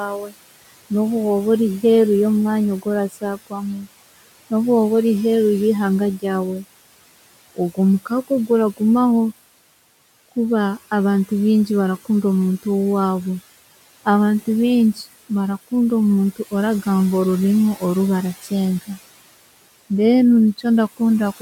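Noise suppressor artifacts run through the whole clip. The suppressor pulls the room noise down by about 17 dB wherever it judges the band to be steady hiss, so the background dips between phrases and creeps back under the talking.

Right at the start, from 0.08 to 0.34 s, there's speech cut by the noise suppressor. It mistook roughly a fifth of a second of soft speech for noise and dropped it by up to about 17 dB, so the opening sounds swallowed. It happens again from 3.1 to 3.88 s, with around half a second ducked by up to about 18 dB, and those bits come out faint. The room noise itself sits about 19 dB below the speech.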